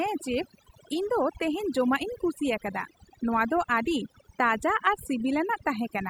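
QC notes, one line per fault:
Throughout: overdone noise removal. The noise reduction was pushed too hard, so whole frequency bands near the noise estimate get pulled way down or switched off. The quieter parts of the speech go with them, which leaves the gaps nearly silent with little twinkling specks.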